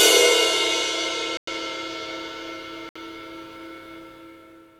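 Two Bluetooth stalls, likely from packets held up by interference and draining the buffer, drop the sound to silence for 102 ms at 1.37–1.48 s and 64 ms at 2.89–2.97 s before it resumes.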